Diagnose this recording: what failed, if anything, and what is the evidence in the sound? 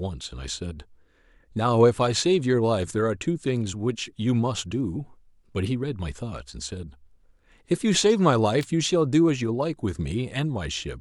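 At 8.61 to 8.64 s a sharp snap cuts into the speech. It lasts about 23 ms and peaks around -20 dBFS. It sits on top of the speech rather than replacing it. That is an electrical switching spike, and the stage is the analogue wiring. The likely cause is a nearby switch, motor or static discharge arcing briefly. The cable or input picks up that burst as interference before conversion.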